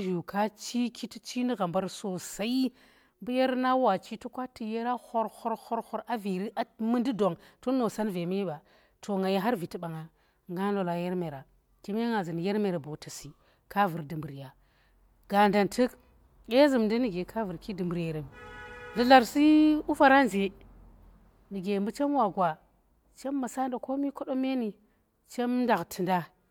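No technical faults can be heard anywhere in the speech.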